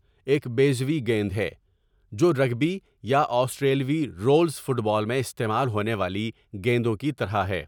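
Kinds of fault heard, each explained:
No technical faults can be heard in this speech recording; the signal stays steady and intact throughout.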